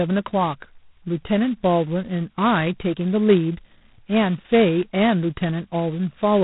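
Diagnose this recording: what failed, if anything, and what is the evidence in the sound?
G.726 ADPCM damage runs through the whole speech clip, at the codec stage. Nothing passes above 3.9 kHz, and a harsh, rasping hiss rises and falls with the speech level. That points to 16 kbit/s, just 2 bits a sample of prediction error.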